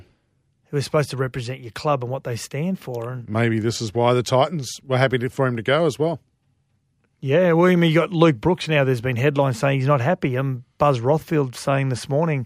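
Nothing technically wrong turns up anywhere in this speech recording, so there's no fault to point to here.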